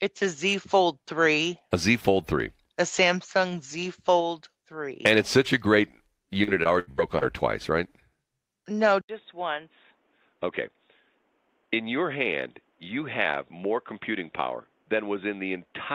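From 6.43 to 7.23 s the speech turns choppy and robotic. Repeated packet loss left five holes, the longest 81 ms, each patched by continuing the last sound. At 9.01 s, after an 80 ms silence, the speech becomes duller and around 5 dB quieter, with nothing above 3.7 kHz and new noise roughly 40 dB down. The input likely switched to a poorer device.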